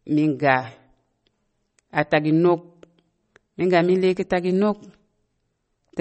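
Throughout, the speech sounds watery and swirly, with nothing above 8.4 kHz. The likely cause is MP3 compression at a low bitrate, which fits 32 kbps: short of bits, the encoder cuts the treble and drops weak frequency lines that flicker between frames.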